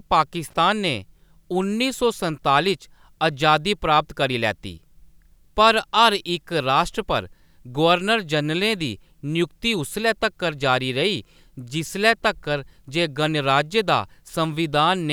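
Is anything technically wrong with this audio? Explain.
Yes. The speech has one fault: loose connector crackle. It comes right at the start, from 0.48 to 0.53 s, lasting about 55 ms. A worn or dirty contact somewhere in the cable path briefly loses and regains connection as it shifts. Each break chops the signal, and each reconnection snaps any standing DC offset back onto the line. The result is a short, ragged burst of scratchy crackle.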